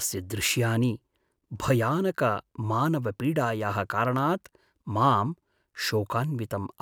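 No technical faults are audible.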